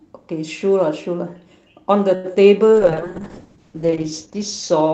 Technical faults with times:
2.15-2.26 short stall from a late packet
2.74-4.93 call bitrate drop

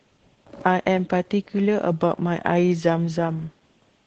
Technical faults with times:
0.00-4.06 Opus voice compression

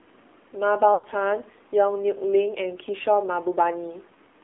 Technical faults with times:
0.00-4.43 AMR narrowband mobile codec
0.94-1.06 lost AMR speech frames

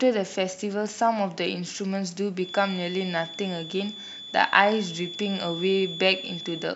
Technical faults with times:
2.35-6.75 feedback whistle

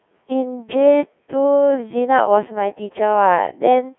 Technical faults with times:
0.00-3.99 Codec 2 vocoder

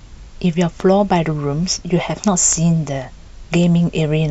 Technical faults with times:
0.80-0.82 loud pop
2.53-2.55 loud pop

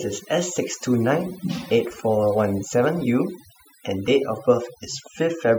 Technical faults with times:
0.00-5.59 overdone noise removal

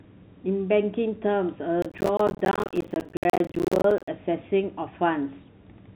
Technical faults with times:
1.82-4.08 processor overload crackle

